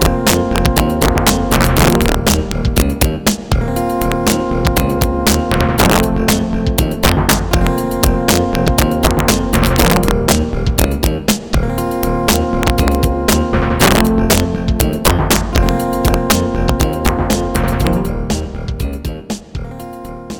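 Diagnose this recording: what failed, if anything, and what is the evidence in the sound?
Integer overflow at the sample-format conversion stage: driven about 5 dB too hot, around one percent of samples wrap sign, cracking violently throughout, visible as sudden sign-flipping jumps in the waveform and broadband spectrogram spikes.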